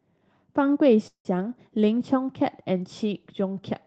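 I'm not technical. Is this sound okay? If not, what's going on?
No. A call audio freeze runs from 1.07 to 1.27 s: the speech stops and a fading buzz fills the pause, with about 0.1 s of near silence, before the speech resumes where it left off. The likely cause is network packets briefly held up in transit.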